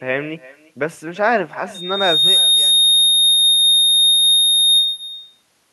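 From the start, the speech carries an echo with no canceller. The far end's loudspeaker feeds its microphone and nothing removes that path, so every phrase returns roughly 0.3 s later. The copy sits about 18 dB down and sounds thin.

At 1.74 s a loudspeaker feedback squeal begins. A microphone-to-speaker loop has gain above one at 3.7 kHz, so that single tone grows over roughly 0.7 s. It then holds a few decibels above the speech until it stops at 5.09 s.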